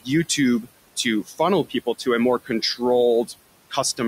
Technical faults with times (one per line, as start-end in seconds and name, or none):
0.00-4.07 noise suppressor artifacts
1.26-1.40 speech cut by the noise suppressor
1.65-2.07 speech cut by the noise suppressor
2.44-2.81 speech cut by the noise suppressor